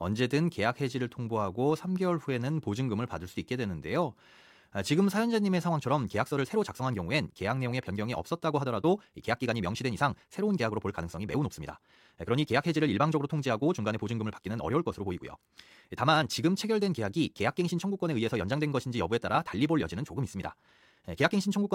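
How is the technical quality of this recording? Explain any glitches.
The recording has one fault, a time-stretched section. From 5.67 s to the end, the speech runs 1.41 times faster at unchanged pitch, and sounds rushed. It is likely caused by software dropping short slices. A spectrogram shows tighter syllable spacing but harmonics at the same frequencies.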